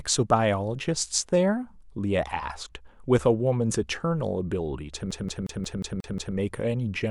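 From 5.11 s to 6.36 s the audio is caught in a CD stuck on one turn: a scratch knocks the laser back one track at the same point of every rotation, so the player keeps reading the same stretch of disc. The speech locks into a loop of about 0.18 s that plays seven times, each pass ending in a brief mute as the pickup jumps back, giving the quick, regular stutter of a skipping CD.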